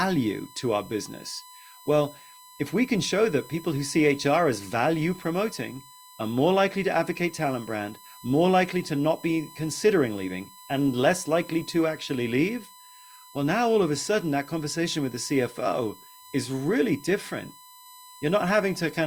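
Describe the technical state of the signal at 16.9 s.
At 16.9 s, as through the whole clip, a USB whine sits under the speech: a steady, fixed-pitch tone at 1 kHz, roughly 25 dB below the signal. It comes from the USB bus drawing current in 1 ms frames, a pulse that leaks into the audio through shared power or ground. Mains hum sits at 50 or 60 Hz and its harmonics, far lower. This whine is a thin, high tone locked to the 1 kHz frame rate.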